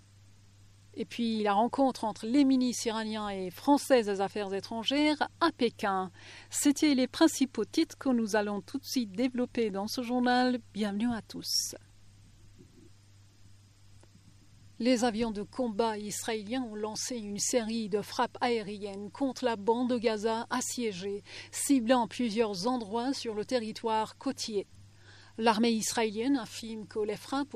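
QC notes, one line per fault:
No fault found in this clip.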